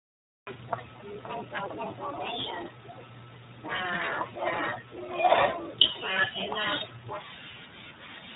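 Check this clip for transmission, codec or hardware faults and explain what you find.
Two faults: the whole clip has been through the iLBC codec, and it has a cut-off start.

The iLBC codec damage runs the full length and is plainly audible. Nothing above 3.8 kHz survives, so the speech sounds narrow and boxy. Because each frame's excitation is coded on its own, with nothing carried over, there's a rough, slightly synthetic edge throughout. The character points to the 15.2 kbps mode with 20 ms frames.

The cut-off start means there's digital silence from 0 to 0.47 s, and then the speech drops in mid-sound at 0.47 s. The recording or stream began late, so that first sound has no natural attack or fade-in. It jumps straight in.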